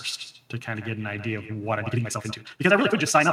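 From the start and through the whole clip, the speech is trailed by an echo with no canceller: a distinct second copy arriving roughly 150 ms late, about 15 dB below the direct speech. The far end's microphone picked up its loudspeaker and returned the signal over the network, and nothing subtracted it. Unlike room reverberation, which decays smoothly into a tail, this is a discrete delayed repeat that tracks each syllable at a fixed lag.

At 1.74 s the pace jumps and runs about 1.89 times faster to the end of the clip, while the pitch stays where it was. That combination points to a time-stretched section, likely squeezed by software that drops short pieces to keep pitch. Simply playing the audio faster would raise the pitch along with the tempo. Here the speech sounds rushed at an unchanged pitch.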